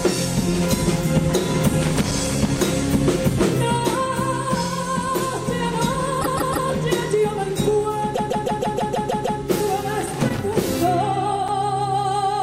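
From 1.82 to 2.63 s there's loose connector crackle: a worn or dirty contact flickering between connected and open, chopping the signal, so you get an uneven scratchy burst. The same thing returns from 10.01 to 10.56 s.

At 6.21 s the repeated frames problem shows up. A chunk of roughly 157 ms, which fits a run of six compressed frames, plays three extra times through 6.68 s. You hear a stutter, and the clip gets about 470 ms longer.

It happens again from 8.14 to 9.39 s, with that same 157 ms block looping eight more times, which stretches things by roughly 1.25 s.

Right at 11.48 s there's a block of digital silence, about 5.8 ms of silence, which fits a 256-sample buffer that wasn't filled in time. There's no fade at either edge, so it comes across as a single sharp tick.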